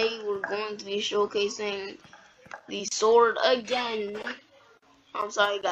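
Nothing here calls for comment; the audio runs its whole length without any technical trouble worth pointing out.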